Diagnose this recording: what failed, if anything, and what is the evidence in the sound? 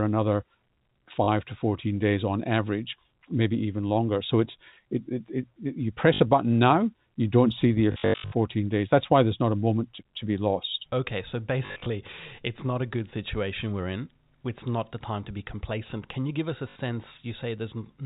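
Network stage: packet loss with last packet repeated at 1.24, 6.14, 7.92–8.32 (after "you don't see the"), 11.66–11.86 and 16.7 s. Replaying the previous packet, which fits 20 ms packets, buzzes near 50 Hz. The waveform shows repeated blocks.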